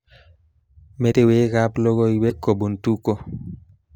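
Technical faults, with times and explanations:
1.11–1.14 s and 2.29–2.32 s, broken MP3 bit reservoir: dropped frames likely left the next frame fetching its borrowed reservoir data from another frame's bytes, so the speech lurches forward and each spot carries a brief garbled disturbance about one 26.1 ms frame long.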